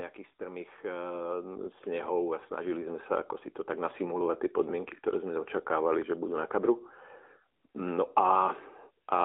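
From start to finish the speech carries the sound of the AMR narrowband mobile codec, with a passband of roughly 300 Hz to 3.6 kHz and nothing above 4 kHz. Its vocal-tract model and sparse pulse excitation, at a rate consistent with 10.2 kbps, leave a plainly audible buzzy, synthetic edge on the voice.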